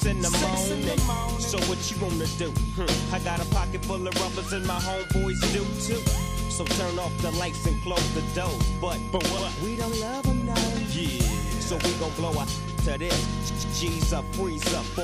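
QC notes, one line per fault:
9.37 to 9.44 s, repeated frames: a brief stutter as a 69.7 ms slice of audio plays twice in a row. A run of compressed frames, which fits a block of about three, was sent twice, so the decoder played it again and the clip grew by 69.7 ms.
13.48 to 13.76 s, repeated frames: a longer stutter, a 139.3 ms block heard three times. A run of compressed frames, which fits about six, was duplicated twice over, stretching the audio by 278.6 ms.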